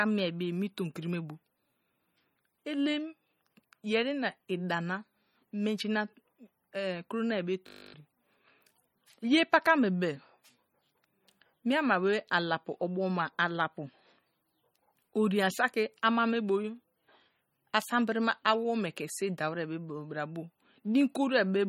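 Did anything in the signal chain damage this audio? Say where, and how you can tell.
Yes. The whole clip carries a watery, swirly texture, plainly audible, and nothing comes through above 18.6 kHz. That points to the codec stage, likely MP3 compression at a low bitrate, something like 32 kbps. Weak spectral lines get zeroed and flicker between frames, and the encoder cuts the top end.

There's also a system hang loop in the driver or buffer stage from 7.68 to 7.94 s, right after "nai be". A 20 ms chunk repeats 13 times, giving a steady 50 Hz buzz. The system stalled while the hardware kept cycling one ring buffer, losing roughly 0.3 s of audio.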